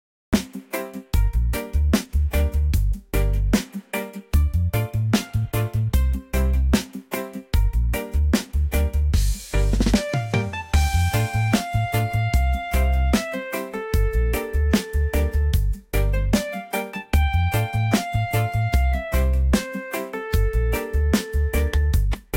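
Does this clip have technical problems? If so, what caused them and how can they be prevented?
Yes. Cut-off start from 0 to 0.33 s: capture began after the sound was already underway, so audio jumps from digital silence straight into mid-sound with no attack. Start recording a second or two before the source begins, or keep a pre-roll buffer running.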